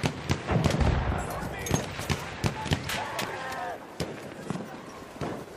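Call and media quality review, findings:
Damaged data in a compressed stream, twice: a short garbled blip at 0.89 to 0.93 s (about 40 ms) and another at 5.39 to 5.45 s (about 60 ms). Probable component is the decoder input: bad bytes in the compressed payload, so the frames there get misread or dropped and the decoder has to hunt for the next valid frame header before audio comes back clean. Worth checking the source file or transport integrity first.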